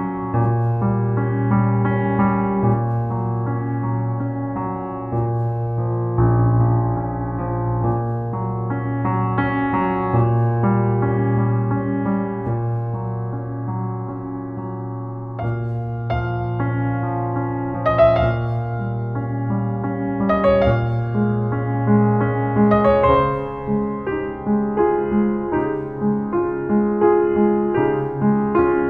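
Nothing here calls for a technical note; the audio runs along without a single fault worth pointing out.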